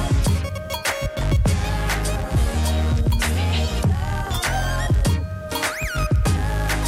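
Clock slip clicks run from 0.17 to 6.85 s: faint, regular ticks roughly every tenth of a second, around seventy in all. The likely cause is two unsynchronised device clocks about 200 ppm apart, forcing a single-sample drop or repeat at each slip.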